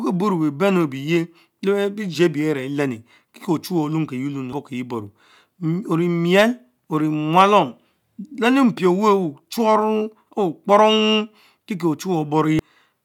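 Two brief glitches interrupt this speech recording, each only a few milliseconds long: one at 4.53 s and another at 12.59 s. They are the signature of damaged data in a compressed stream. At those points, part of the encoded data was corrupted, so the decoder misread the affected frame and briefly lost sync before locking onto the next valid frame header.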